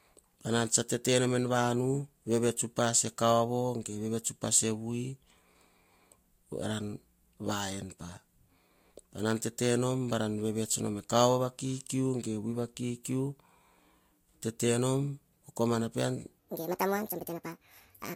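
From 16.39 s to the end at 18.16 s, the voice suddenly turns high and hurried, rising by roughly ten semitones as it races along at 1.63 times normal speed. This section at the wrong speed likely comes from that stretch being played or resampled against the wrong clock.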